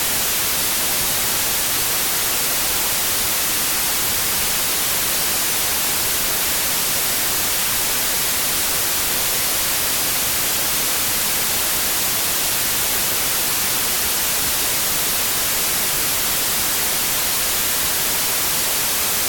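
Throughout the audio, loud broadband noise buries a slowed, lower-pitched copy of the sound, playing at about two-thirds speed. This is a wrong sample width, which fits packed 24-bit data read as 16-bit. A plain sample-rate error would slow the sound without the noise.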